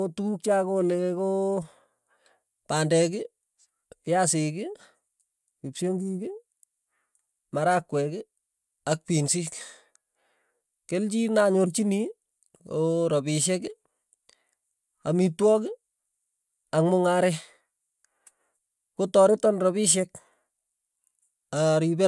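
No dropouts, glitches, distortion or other transmission or processing faults are audible anywhere in the recording.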